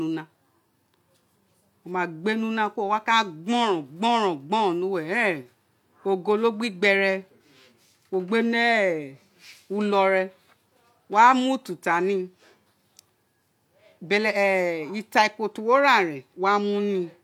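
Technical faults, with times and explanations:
No technical faults can be heard in the speech recording, which stays steady and intact from beginning to end.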